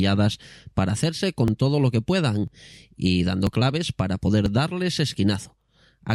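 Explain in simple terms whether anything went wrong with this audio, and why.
The speech skips briefly six times, at 0.49, 1.48, 2.48, 3.47, 4.46 and 5.46 s, including just before "para hacerse" and around "claves para". The steady one-second spacing of these tiny, very short gaps, rather than random dropouts, points to audio missing between chunks as the likely cause.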